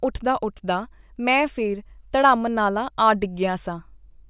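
Nothing technical stands out in this short bit of speech; there's no fault to point to here.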